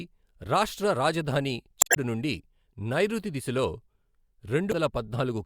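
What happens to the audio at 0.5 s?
Nothing goes wrong at 0.5 s; the speech there is intact, with no dropout, click or distortion.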